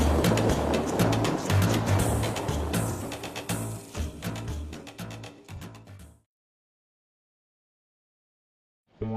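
AAC frame loss with concealment at 2.91 to 3.03 s and 5.55 to 5.61 s: the decoder rebuilt the missing audio from the last good spectrum, leaving brief smeared, noisy or phasey patches.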